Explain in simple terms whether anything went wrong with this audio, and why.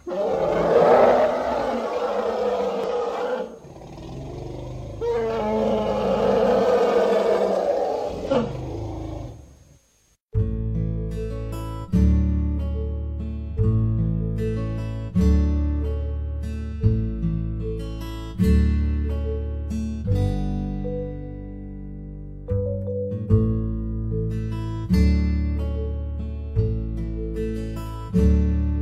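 Twice, part of the compressed data carrying this audio was damaged: bytes were lost or scrambled, so the player could not read those pieces properly and had to hunt for the next clean starting point. This damaged data in a compressed stream comes out as a chirp, squawk, click or short hole, around 2.84 to 2.89 seconds and again around 8.27 to 8.32 seconds, each lasting about a twentieth of a second.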